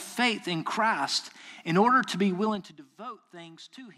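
Zipper noise at 2.42 to 2.79 s, after "in order to be": the level drops about 20 dB in unsmoothed 3 dB steps, around twenty a second, each clicking audibly.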